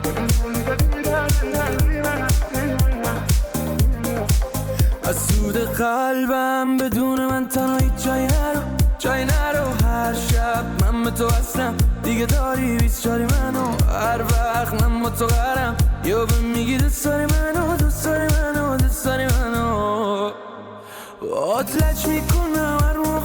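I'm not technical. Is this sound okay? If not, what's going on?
Yes, this one's fine: nothing in it is broken or glitching, so there's nothing you need to worry about.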